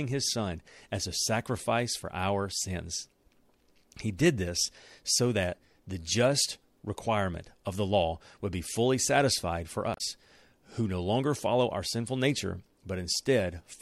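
At 9.94 to 10.01 s, just after "be fully satisfied for", damaged data in the compressed stream makes the decoder lose sync, giving a brief chirp, squawk, click or short hole.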